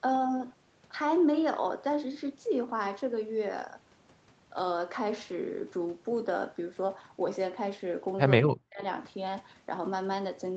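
From 8.46 to 8.82 s the speech suddenly sinks by about 40 dB, nearly vanishing for a bit under half a second. That's most likely speech suppressed in double talk: the echo canceller heard both sides at once, mistook this talker for loudspeaker echo, and clamped down hard.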